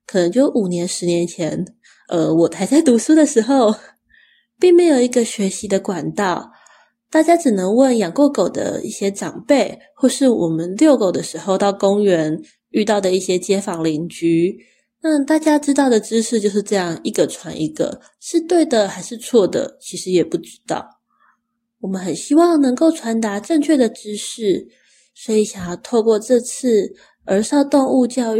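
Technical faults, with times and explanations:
No technical faults can be heard anywhere in the speech recording; the signal stays continuous and steady, with no disturbance to its level, timing or tone.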